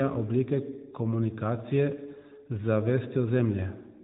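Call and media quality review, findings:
No faults found; narrowband mobile-codec path, nothing above 3.8 kHz.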